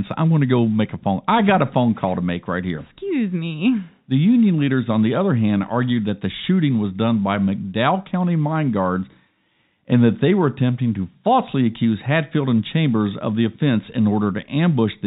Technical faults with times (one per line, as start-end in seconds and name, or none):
none